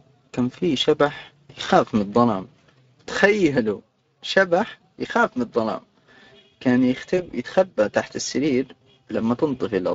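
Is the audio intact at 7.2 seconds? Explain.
No. At 7.2 seconds there is VoIP packet loss concealed by the speech codec, running from about 7.17 to 7.33 s. A gap points to a single lost 20 ms frame. The decoder filled it by carrying forward its last pitch and spectral shape at falling gain, so the sound there smears into a buzzy tone or coloured noise that fades. Because each frame is predicted from the one before, the weak, distorted quality lasts about 160 ms, well beyond the missing frame, before the audio recovers just ahead of "يتخبى تحت السرير".

That moment also carries the Speex codec artefacts present across the whole speech clip. The CELP coding runs at about 20.6 kbps. The result is a plainly audible hoarse, noisy roughness, with anything above 8 kHz only a shaped hiss rather than real high-frequency detail.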